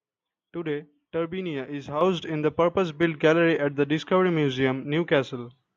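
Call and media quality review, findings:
Microphone volume stepped up at 2.01 s: speech and background noise floor jump together by about 8 dB in a single step. Component: capture-side automatic gain control in call software raising device input volume after judging the mic too quiet.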